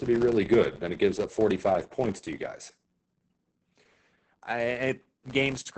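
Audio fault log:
throughout, filter restarted on every block: a steady 100 Hz buzz tracking the speech level, as each block's filter starts from silence and ticks; regular, unlike random clicks.
throughout, Opus voice compression: heavy SILK coding at 10 kbps, nothing above about 8.7 kHz; speech sounds muffled, hoarse and slightly robotic, not simply low-passed.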